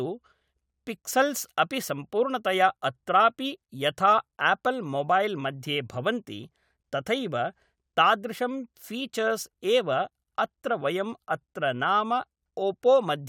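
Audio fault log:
No faults detected in the speech recording.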